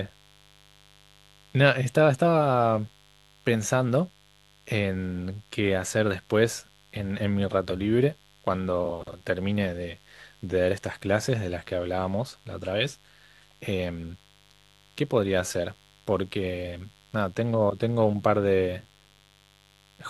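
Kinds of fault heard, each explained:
Mains buzz, throughout: switching spikes from a 50 Hz supply leak in, adding a steady raspy buzz of high harmonics some 35 dB below the speech.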